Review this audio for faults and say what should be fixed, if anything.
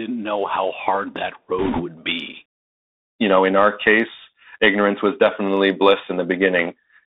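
The whole clip carries the Bluetooth CVSD headset codec. The band runs from about 250 Hz to 3.7 kHz, which fits a 64 kbps CVSD stream. Each sample is one up-or-down bit with an adaptive step. Loud high sounds outrun the step. S sounds turn scratchy over a granular hiss. Record through a wideband path, such as a wired microphone or a headset using a wideband Bluetooth codec.

From 1.59 to 1.82 s there are bit errors on a Bluetooth voice link. The rate is roughly one bit in twenty. Each CVSD bit carries the same small weight, and errors fade quickly. So there are no sharp clicks, only a rushing, crackly noise over the speech. Keep the headset close to the receiver and away from interference to protect the link.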